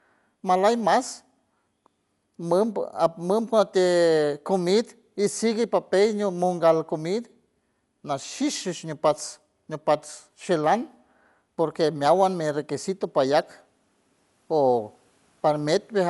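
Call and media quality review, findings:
Speech dull throughout. Nothing above 11.5 kHz. Rough, fluttering noise around voiced tones, plainly audible. Likely Dolby Digital compression at low bitrate. Encoder cut the band short and left many frequency lines without mantissa bits. Decoder filled those lines with dither noise. Band limit and roughness fit a 64 kbps stream.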